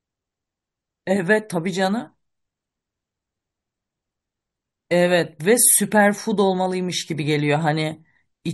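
No technical faults can be heard anywhere in the speech recording; the signal stays continuous and steady throughout.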